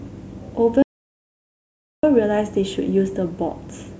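At 0.83 s the speech cuts off abruptly into silence, with no room tone, until it resumes mid-flow at 2.03 s. This audio dropout to silence loses about 1.21 s, likely because the input failed while the recorder kept writing silence.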